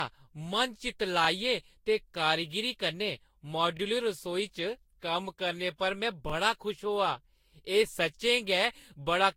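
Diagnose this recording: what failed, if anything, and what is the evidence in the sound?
Codec stage: the speech sounds swirly, smeared and hollow, with nothing above 16.6 kHz and blurred attacks. That's likely generation loss from re-encoding Vorbis about five times.

Buffer stage: overlapping chunks cause stutters at 1.25–1.27, 3.77–3.80, 6.30–6.32 and 8.82–8.85 s. Each 2.5-second chunk replays 25 ms at the join.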